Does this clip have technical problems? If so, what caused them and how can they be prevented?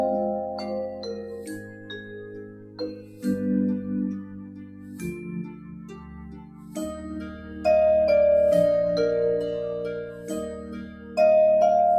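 Yes. A noise suppressor applied to music or sounds runs through the whole clip. Built for speech, it treats sustained and ambient material as noise, so gain swings by around 15 dB and held parts pump and thin. Disable speech noise suppression for non-speech sources.

Sound is cut by the noise suppressor at 1.59–2.12, 2.42–2.79, 2.95–3.23, 4.25–5.02, 5.44–6.76, 7.35–7.55 and 10.63–11.17 s, dipping about 6, 7, 7, 8, 7, 4 and 6 dB. The processor judges these steadier or decaying stretches to be noise and pulls them down. Use a music mode or bypass the suppressor.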